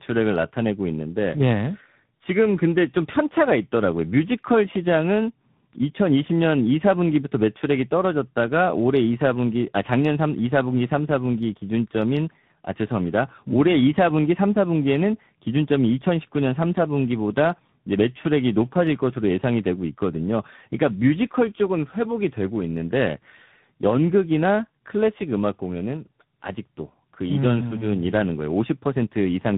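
Throughout, tandem speech coding leaves the speech rough, muffled and warbly, with nothing above 3.8 kHz, which fits a low-rate AMR-NB leg re-encoded through G.711 and G.726.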